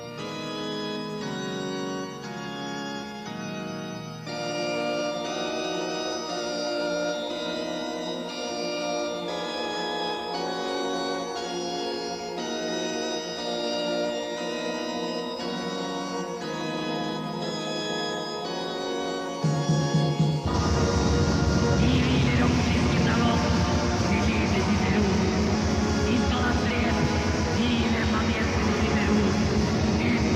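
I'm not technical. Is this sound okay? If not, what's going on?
Yes, this sound is okay. Nothing in it stands out as a technical problem.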